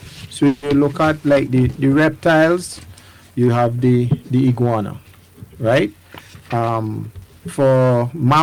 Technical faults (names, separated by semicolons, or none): call audio freeze; jitter buffer speed-up